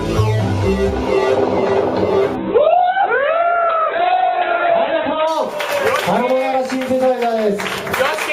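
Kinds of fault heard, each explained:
call bitrate drop: the encoder was starved of bits, so from 2.37 to 5.35 s the sound turns coarse and muffled, losing everything above 4 kHz.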